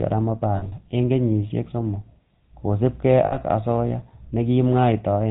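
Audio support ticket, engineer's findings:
GSM full-rate codec, whole clip. Buzzy, gravelly roughness on the speech, nothing above 4 kHz. Vocal-tract model driven by coarse pulse excitation (every third sample kept), which fits a 13 kbps full-rate stream. Damage plainly audible throughout.

Lost GSM frames, 0.56–0.73 s, just before "en kenyisiek somok kosiibge": about 120 ms missing, scattered across 160 ms, longest gap around 70 ms. Then 3.26–3.37 s, right after "en kenyisiek somok kosiibge": 60 ms. Last good frame repeated gives a rough, metallic ring. Points to about six and three dropped frames.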